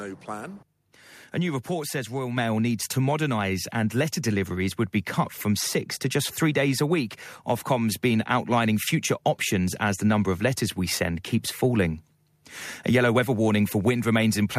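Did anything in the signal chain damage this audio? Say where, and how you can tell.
Yes. At 2.37 s the microphone volume is stepped up. The level rises by about 4 dB in a single step. It does not ramp. The speech and the background noise floor jump together, so the change happened before the sound was separated out. That points to the call processing stage. The software judged the microphone too quiet and raised the device's input gain at once. Everything after that point is captured louder.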